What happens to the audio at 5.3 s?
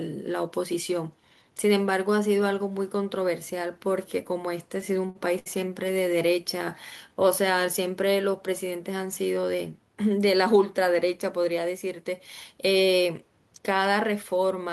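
At 5.3 s the audio is in the middle of repeated stalls (stutter), from 4.81 to 5.48 s. Packets arrived late, so the jitter buffer ran dry five times. Each time the receiver stretched the last sound, for 144 ms in total with the longest gap at 68 ms, fading it during the longer waits. Nothing is lost, but the speech drags and stutters. On a waveform this shows as short runs of repeated cycles, and on a spectrogram as brief smeared, frozen bands.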